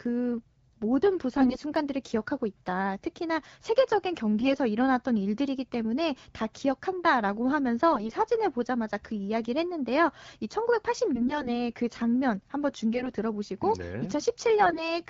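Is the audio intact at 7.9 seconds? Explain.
No. AMR bit errors hit from 7.92 to 8.16 s: flipped low-priority bits, at a rate of several percent, misplace the excitation pulses and skew pitch, gain and spectral detail, so the speech keeps its rough pitch and level but turns hoarse, scratchy and gargly.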